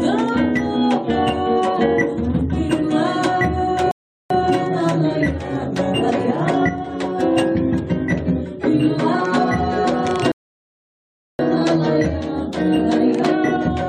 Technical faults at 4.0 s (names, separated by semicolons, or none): rebuffering stall